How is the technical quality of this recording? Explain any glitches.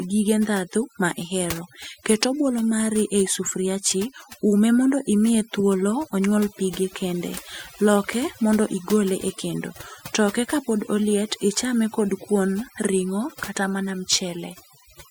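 The recording carries one fault for its whole length: overdone noise removal. A noise reducer set too aggressively is gating individual frequency bands whenever they sit near its noise estimate, so the pauses drop to near silence dotted with twinkling specks, and the quieter parts of the speech are stripped away with the noise. Unlike a broadband noise gate, which mutes everything at once, the specks here flicker independently across frequency.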